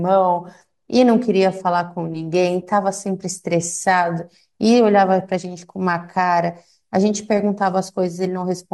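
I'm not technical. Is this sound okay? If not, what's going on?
Yes, this sound is okay; nothing is going on that needs fixing.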